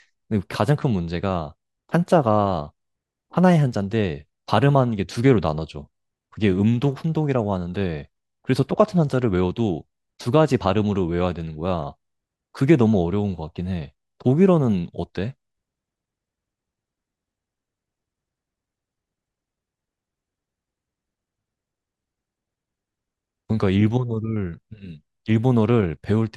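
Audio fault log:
No faults are heard anywhere in the speech. Nothing in the recording calls for a timed entry in this log.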